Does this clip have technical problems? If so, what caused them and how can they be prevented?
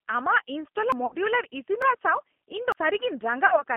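Yes. The whole clip has plainly audible G.729 codec damage. The band runs only from about 250 Hz to 3.4 kHz, and the speech has the slightly rough, synthetic texture of a model-based coder. That coder rebuilds each 10 ms frame from a vocal-tract filter, a pitch predictor and a few pulses, which fits the 8 kbit/s G.729A variant. Unlike plain band-limiting, the damage lies in the grain of the sound itself, not just missing treble. To prevent it, record locally or use a wideband codec instead of narrowband G.729.

Short skips occur at 0.92, 1.82 and 2.72 s. Each drops roughly a tenth of a second, with the two sides butted together and no gap of silence. This is likely audio missing between chunks: a recorder or processor working in blocks that loses a piece each time it changes over. The spacing of about 0.9 s fits 1 s chunks minus the lost piece. Unlike packet loss, nothing fills the hole, and the sound simply jumps forward. 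To prevent it, use a capture pipeline that hands over chunks without gaps, for example by double-buffering.

From 1.06 to 1.16 s and from 3.46 to 3.62 s, the sound smears into a fading, stretched-out continuation of the voice. This is VoIP packet loss concealed by the speech codec. About 60 ms went missing each time, which fits two lost packets. The decoder extrapolated its last pitch and filter with falling gain, and the sound stays weak or distorted for tens of milliseconds past the gap while the decoder recovers. Unlike the chunk skips, the hole is filled with synthetic sound rather than cut out. To prevent it, improve the network path or add a jitter buffer and forward error correction.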